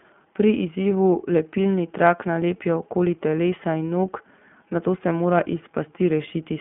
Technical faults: iLBC codec

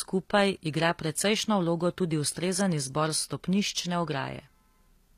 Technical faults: HE-AAC compression

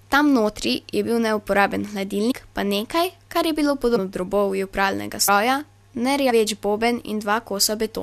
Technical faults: compressed frames skipped

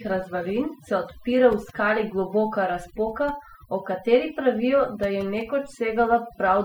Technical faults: overdone noise removal

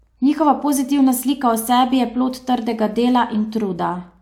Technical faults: none

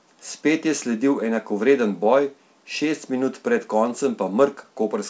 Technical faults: clock drift between sender and receiver; repeated timing corrections

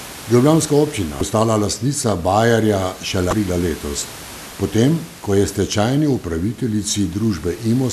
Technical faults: damaged data in a compressed stream

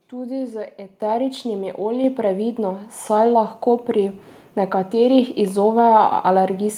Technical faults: microphone volume stepped up

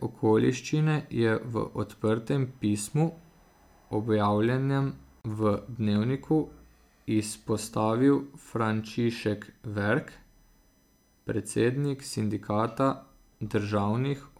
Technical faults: USB whine; gap at a join of encoded pieces

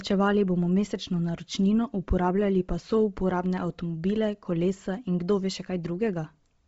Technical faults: Bluetooth LC3 compression

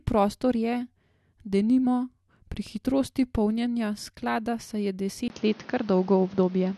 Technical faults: input switched to a poorer device

